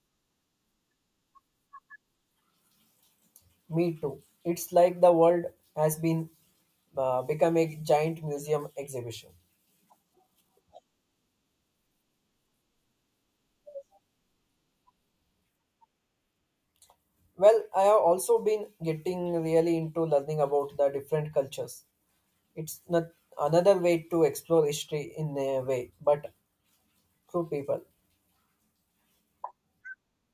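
No technical faults are audible anywhere in this speech.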